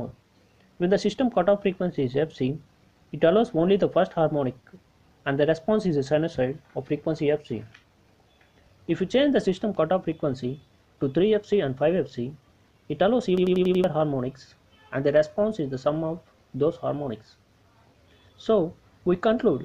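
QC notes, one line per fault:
13.38–13.84 s, system hang loop: machine-gun stutter, one 93 ms slice repeated five times at 10.8 Hz as the frozen ring buffer kept cycling.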